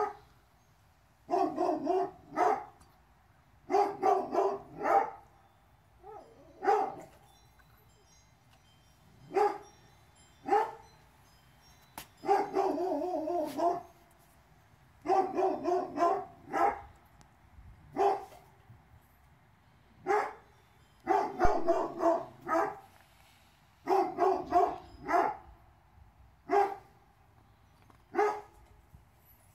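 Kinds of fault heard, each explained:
Phantom power thump: someone switched the supply on a live input, so a deep thump lands near 21.45 s, peaking around -17 dBFS and dying away within about 112 ms.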